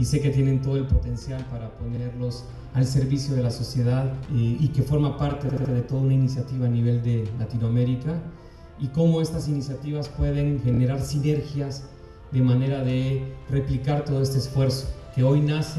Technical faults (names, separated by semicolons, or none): repeated frames